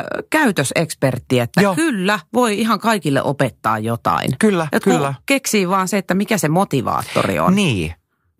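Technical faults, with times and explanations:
4.51–6.75 s, block size mismatch (truncated): Just after "ihan kaikille opettaa jotain", a 43.1 Hz buzz sits on the speech. One stage writes longer blocks than the next reads, which fits 1024-sample blocks. Each block's end is dropped. The buzz is that block rate. Pace stays normal.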